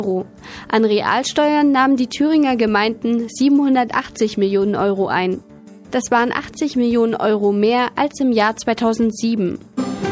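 No technical faults are audible.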